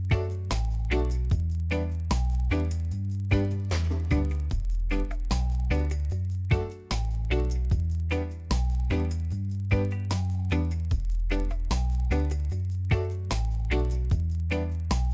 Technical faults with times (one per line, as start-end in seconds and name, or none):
0.00-15.14 resampler restarted on every block